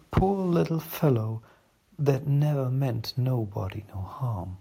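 Right at the start, from 0.17 to 0.23 s, the speech hits hard clipping that sounds like microphone overload. It's pushed about 15 dB past the converter's limit, so roughly half the waveform gets its tops sheared flat, giving a harsh, crackly burst. At 0.18 s the level drops by about 2 dB in one step, likely the call software stepping the microphone volume down because of that overload. The same thing happens again, more mildly, from 1.03 to 1.10 s: only about 2 dB over and just a few percent of samples flattened, so there's a slight gritty edge. At 1.17 s the level steps down another 3 dB or so, probably a second automatic gain cut reacting to that peak.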